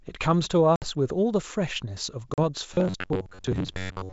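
Packet loss on an ADPCM call strikes twice: 60 ms go missing at 0.76 to 0.87 s, which fits about three packets, and 40 ms at 2.34 to 2.39 s, about two. Each gap drops to abrupt silence, and because the decoder's predictor and step size lose sync with the sender's, the speech comes back slightly distorted before settling.

From 2.74 s to the end at 4.13 s, the player is likely running short of fresh audio and repeating a roughly 11 ms buffer in place of the real stream, with about half the sound replaced. The repeats impose a steady buzz near 94 Hz, producing a robotic sound from repeated short buffers: metallic and rigid, loosely tracking the wideband speech underneath.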